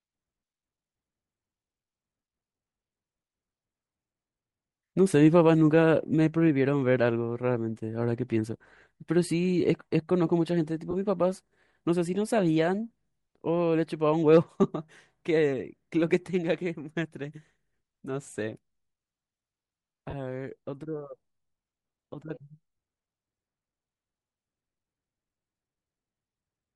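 Speech with a breathy, grainy edge throughout and a noise-filled upper band, plainly audible and likely from Bluetooth LC3 compression at a bitrate that fits 48 kbps with 7.5 ms frames. Lost LE Audio frames cause brief noisy smears at 10.91 s (22.5 ms) and 20.10 s (30 ms), where the decoder repeats the last spectrum with scrambled signs.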